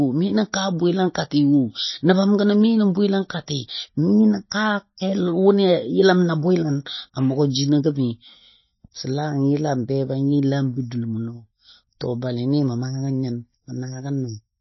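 From start to finish the speech sounds watery and swirly, with plainly audible codec damage: s sounds turn into metallic chirps, consonant attacks smear, and nothing is heard above 5.8 kHz, so the top end is dull. This is likely MP3 compression at a low bitrate, roughly 24 kbps. Starved of bits, the encoder cuts the treble at a fixed frequency and drops weak spectral detail that flickers in and out from frame to frame.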